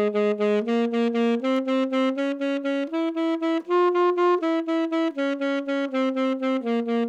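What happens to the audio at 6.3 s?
Nothing goes wrong at 6.3 s; the sound carries on intact through that moment with no audible fault.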